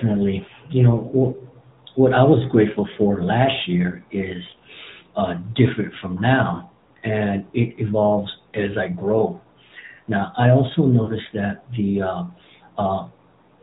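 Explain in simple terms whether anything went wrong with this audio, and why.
The whole recording has passed through the AMR narrowband mobile codec, the phone-network speech compressor. It discards everything above 4 kHz and rebuilds the voice from a simplified model, so the speech sounds muffled, thin and noticeably buzzy and artificial throughout.

There are also three short stretches of lost AMR speech frames, at 6.54–6.64 s, 9.18–9.24 s and 11.04–11.11 s. Radio errors corrupted small chunks of data. The decoder filled each gap by repeating the last good sound at fading volume, so the single lost frame at 9.18 s comes across as a brief dip or warble, while the two-frame gaps at 6.54 s and 11.04 s sound drawn out.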